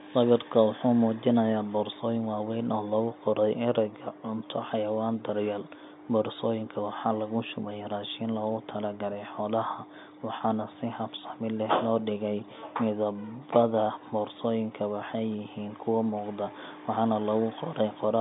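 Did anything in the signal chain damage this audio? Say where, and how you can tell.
No, no stage in the chain damages this speech; it runs through a G.711 telephone path at 64 kbps, with the band held to about 150 Hz to 3.7 kHz as a telephone line does.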